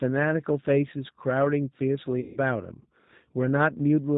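From start to finish the speech carries the G.729 codec, here the G.729A variant at 8 kbit/s, and the damage is plainly audible. Each 10 ms frame is rebuilt from a vocal tract filter, a pitch guess and a handful of pulses, so the voice sounds rough and faintly synthetic, with nothing above 4 kHz. Unlike a simple low-pass or a narrowband transform codec, the graininess follows the pitch and resonances and does not just dull the top end.

From 2.20 s to 2.39 s comes VoIP packet loss concealed by the speech codec, with 160 ms of audio missing, which fits eight 20 ms packets. The decoder keeps repeating its last pitch and filter at falling gain, so the speech smears into a buzzy tone or coloured noise that fades rather than going silent or clicking. That separates it from a dropout or a plain repeat of the audio. The voice stays weak or distorted for tens of milliseconds or more after the gap, as the decoder's state recovers.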